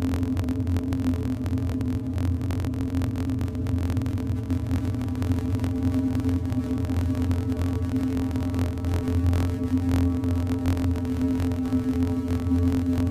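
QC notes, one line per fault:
Throughout: filter restarted on every block. A 43.1 Hz buzz tracks the sound's level. Each block starts from silence with a small click, fitting 1024-sample blocks.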